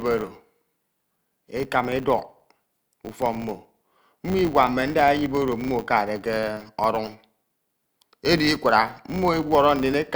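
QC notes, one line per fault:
Throughout: filter restarted on every block. A steady buzz at 100 Hz sits under the speech, which points to processing in 10 ms blocks. Each block's filter starts from silence, leaving a small transient at every boundary. These repeating ticks fuse into a buzz that rises and falls with the speech level.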